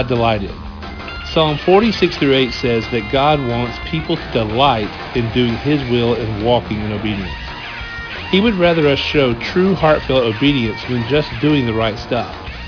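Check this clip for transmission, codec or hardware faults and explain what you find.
There is one fault, aliasing, and it runs through the whole clip. The high end sounds gritty and metallic. Hiss-like and bright content turns into harsh, unrelated tones, and the spectrum stays dense right up to a hard edge at about 5.5 kHz. The sample rate was lowered without a proper anti-aliasing filter, which fits a drop from 48 kHz to 11 kHz. Energy above 5.5 kHz folds back below it, landing roughly 20 dB under the wanted sound.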